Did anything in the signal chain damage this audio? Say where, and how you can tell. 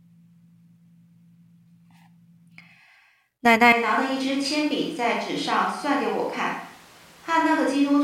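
Yes. At 3.73 s the speech suddenly turns roomy and hollow, thinner in the bass, roughly 5 dB quieter, with room noise rising to about 25 dB below the speech, and it stays that way to the end. This points to a likely switch to a distant microphone at the capture stage, not a gain drop or filter, because the room reflections and noise change too.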